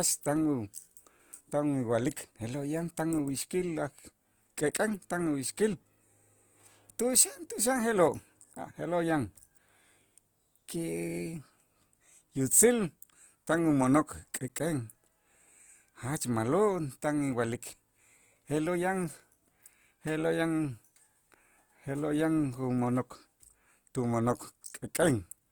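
Throughout the speech, the voice sounds rough and grainy, with a noisy sheen over tonal parts, though the top end still reaches about 20.2 kHz. This is likely Opus compression in music mode, refilling starved bands with folded or noise-like content at a rate fitting roughly 24 kbps.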